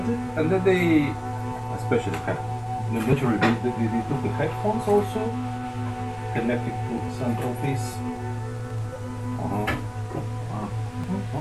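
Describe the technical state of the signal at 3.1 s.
At 3.12 s a short skip, audio missing between chunks, removes roughly 40 ms, likely lost at a 4 s chunk boundary; the waveform shows an abrupt splice, the spectrogram a thin vertical seam.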